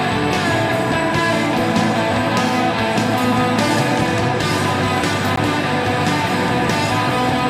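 At 5.36 s a CD skip occurs: the laser jumps to a different turn of the disc's spiral, so a tick and a very brief mute are heard before the sound resumes from another point. The waveform shows a short flat gap, and the spectrogram a thin broadband vertical line.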